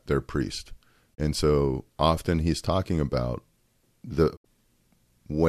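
Digital broadcast dropout at 1.13 to 1.20 s, just after "their priest", and again at 4.35 to 4.46 s. Each time the receiver stopped getting usable frames and muted, fading out over about 20 ms. The first hole removes 24 ms, which fits one lost frame. The second removes 72 ms, consistent with three consecutive frames. Speech resumes mid-programme afterwards, and whatever was transmitted during each gap is simply missing.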